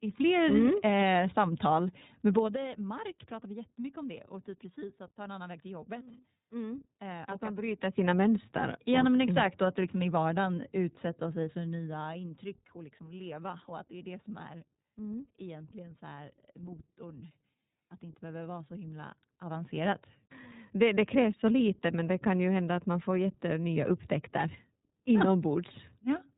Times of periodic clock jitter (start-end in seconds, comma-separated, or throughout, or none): none